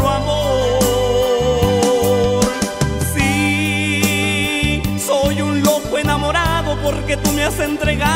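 Nothing stood out as a technical fault on listening to this audio.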